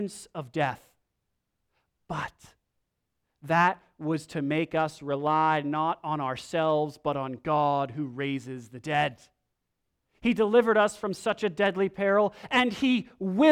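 A speech recording with nothing technically wrong to point to at any moment. No dropouts, clicks, distortion or timing problems show up anywhere in it.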